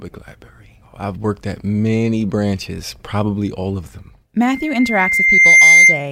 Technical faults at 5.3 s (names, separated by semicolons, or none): loudspeaker feedback squeal